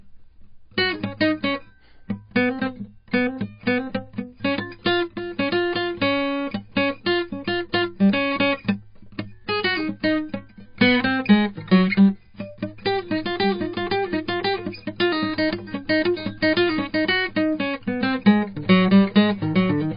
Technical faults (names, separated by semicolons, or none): MP3 compression; pre-echo